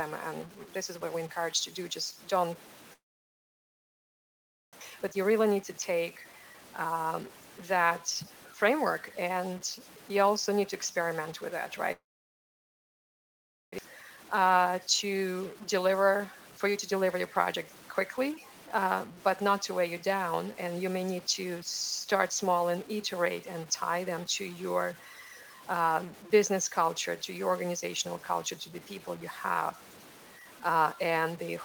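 A stuck bit runs through the whole clip: one converter or data line likely stuck, so roughly half the samples are offset, giving grainy or harsh distortion depending on which bit is stuck, and a noise floor in quiet passages.

At 2.93 to 4.75 s there is a call audio freeze. Delayed packets likely emptied the jitter buffer. The last sound is stretched briefly and then about 1.72 s is silent, inserting a 1.79 s gap without losing anything.

At 4.81 s a skip ahead drops about one and a half seconds of backed-up audio, joining the two sides almost directly.

From 4.90 to 6.62 s a jitter buffer speed-up trims short pitch-period pieces, roughly a fifth of a second in total. The audio plays at 110% speed with unchanged pitch and sounds hurried.

At 11.92 to 13.80 s a long network dropout follows, likely from packets that never arrived. A brief fading continuation gives way to about 1.7 s of silence, and 1.6 s of audio is lost before it resumes further on.

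From 13.89 to 15.89 s a second jitter buffer speed-up again runs at 110%, removing roughly a fifth of a second of pitch periods to cut the accumulated delay.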